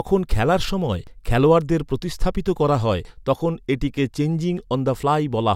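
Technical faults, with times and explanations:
1.07 s and 3.05 s: audio missing between chunks. Roughly 20 ms skips 2 s apart, after "খেলার সময়" and before "তখন এটাকে", likely dropped at chunk handovers.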